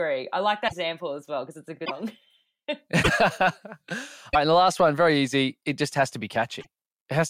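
Speech with five short garbled bursts at 0.67–0.73, 1.84–1.91, 3.02–3.09, 4.33–4.36 and 6.60–6.67 s, likely a broken MP3 bit reservoir. The sound jumps ahead, and the first few 26.1 ms frames after each cut come out garbled, unlike a clean dropout's silent gap.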